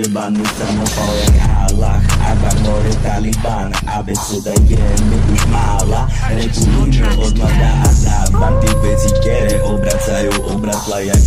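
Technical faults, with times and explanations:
Throughout, hard clipping: the level sits about 1 dB past what the chain can pass, so a small share of peaks, around 2 percent, get sliced flat. Those squared-off tops throw extra high harmonics, giving a light crackle on the loudest moments.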